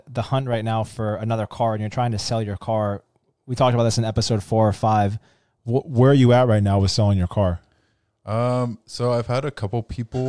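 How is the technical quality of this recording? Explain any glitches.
There is one glitch. From 5.80 s to the end, a wrong sample rate slows the speech to about 0.92 times speed and drops pitch about 1.5 semitones, which fits 24 kHz audio played at 22 kHz.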